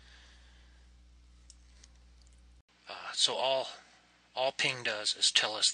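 Input switched to a poorer device at 2.61 s, likely: after an 80 ms gap, the sound loses everything above 9 kHz, shifts about 5 dB, and gains faint new noise.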